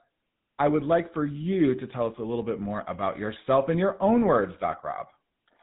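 Throughout, the speech has a buzzy, gravelly roughness and nothing above about 3.8 kHz, plainly audible damage from the GSM full-rate codec's sparse pulse-driven excitation at 13 kbps.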